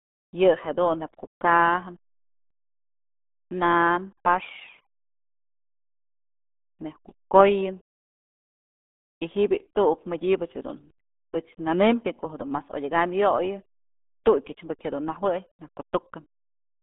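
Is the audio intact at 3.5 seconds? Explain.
No. The RealAudio 14.4 codec damage runs through the whole clip, including 3.5 seconds. The speech sits in a narrow band of about 200 Hz to 3.6 kHz, with nothing above 3.8 kHz. It sounds muffled and gargly, which fits a heavy 8 kbit/s squeeze.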